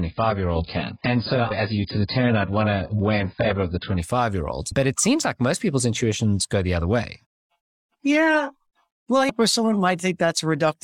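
Adaptive stream starting at a low bitrate, 0 to 4 s: the player opened on a low-bitrate version, so the speech has nothing above 5 kHz and sounds smeared, then brightens suddenly with no gap.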